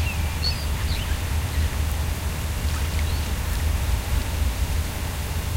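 From 0.43 to 0.51 s there is loose connector crackle. A worn or dirty contact in the signal path was making and breaking as it moved. That chopped the audio on and off. The result is an irregular burst of scratchy crackle lasting about 80 ms.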